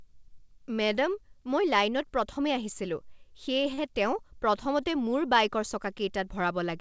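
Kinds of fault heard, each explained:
Short stall from a late packet: Around 3.74 to 3.80 s, one packet arrives late and the jitter buffer runs dry. The receiver fills the gap by stretching the last sound for about 37 ms. It then resumes from the same point, so nothing is lost. The cost is a brief held sound, and the rest of the speech plays 37 ms later. All of it sits within a band ending at 8 kHz, which fits a G.722 call path.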